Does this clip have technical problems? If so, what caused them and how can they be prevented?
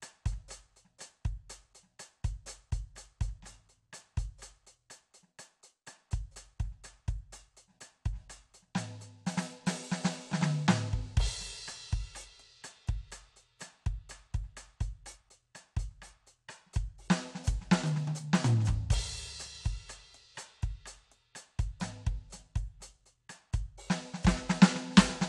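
No, this music clip has no technical problems, so there is nothing to trace or prevent.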